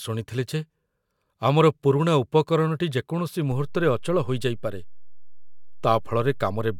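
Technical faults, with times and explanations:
3.52 s to the end, DC step: just after "ଆମର ପୁରୁଣା ଉପକରଣଟି ଯେକୌଣସି" the waveform's zero line jumps by about -32 dBFS and stays offset for the rest of the clip. The sudden baseline shift produces a single low thump, while the speech carries on unaltered above the new offset.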